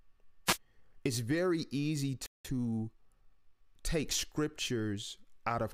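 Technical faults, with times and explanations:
0.46 to 0.58 s, wireless microphone noise hit: the radio link fades briefly as reflections cancel, so receiver noise surges up as a quick swish of static.
2.26 to 2.45 s, playback stall: right after "very easy" the sound just stops for about 185 ms, most likely the player running dry of data or its thread getting blocked.
2.45 to 3.67 s, time-compressed catch-up: coming out of the stall the player trims its backlog, so speech runs about 1.15 times fast at normal pitch.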